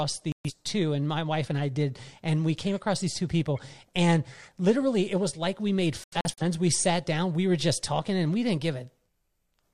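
Digital broadcast dropouts mute the speech from 0.32 to 0.51 s, just before "two and my wife", and from 6.04 to 6.42 s, after "was like we made", the second as short silent holes up to 85 ms. Unlike concealed packet loss, the receiver inserts silence rather than smeared or repeated sound.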